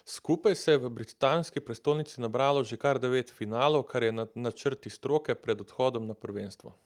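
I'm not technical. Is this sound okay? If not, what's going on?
Yes, nothing stood out as a problem when listening to this recording.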